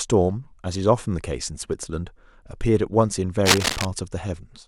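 A short speech recording with one real problem: from about 3.45 to 3.85 s there's a burst of cable scratch noise, a dense, ragged crackle that sits right over the talking for roughly four tenths of a second and comes up about as loud as the speech itself. It's likely a worn cable or connector being moved, so the contact resistance jumps around rapidly and throws those uneven noise bursts into the signal.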